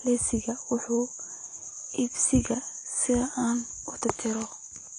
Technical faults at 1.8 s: AAC compression

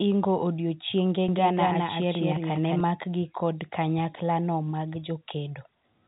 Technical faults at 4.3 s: none

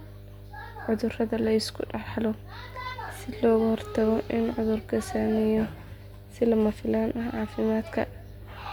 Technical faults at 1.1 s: mains hum

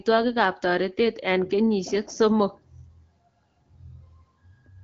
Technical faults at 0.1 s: none

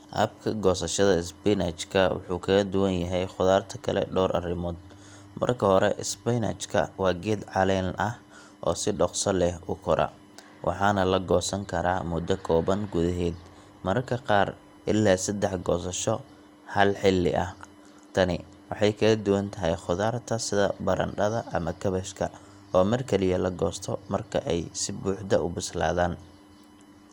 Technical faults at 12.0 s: USB whine; generation loss

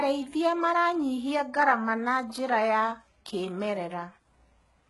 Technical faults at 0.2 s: HE-AAC compression

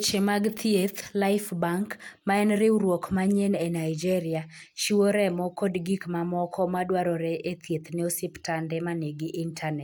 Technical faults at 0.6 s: none

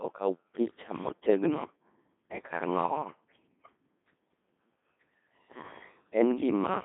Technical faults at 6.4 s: Codec 2 vocoder

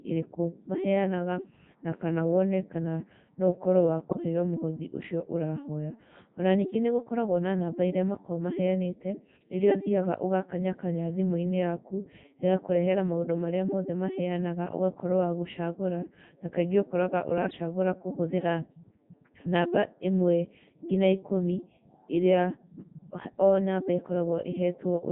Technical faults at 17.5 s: Codec 2 vocoder; bit errors on digital voice radio

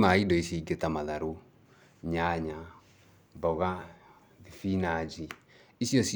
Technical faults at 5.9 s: none

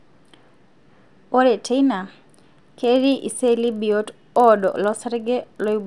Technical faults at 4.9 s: resampler restarted on every block

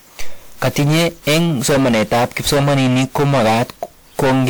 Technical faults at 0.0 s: hard clipping; generation loss

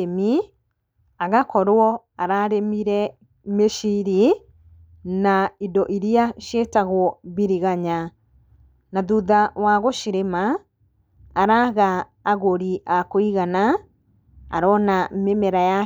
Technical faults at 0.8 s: none

